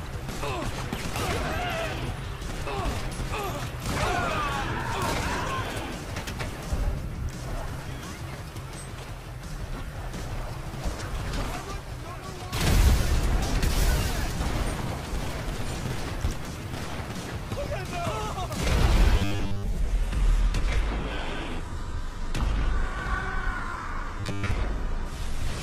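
At 19.18 to 19.63 s the sound turns into a rigid, metallic 100 Hz buzz: robotic sound from repeated short buffers, likely about 10 ms chunks looping while most of the real audio is skipped. From 19.8 s to the end the adaptive stream drops to a lower bitrate with no gap. Codec artefacts rise, which fits a switch from 96 kbit/s AAC-LC to a low-rate 16 kbit/s HE-AAC version. Within that stretch, at 24.20 to 24.51 s, the same 100 Hz robotic buzz comes back.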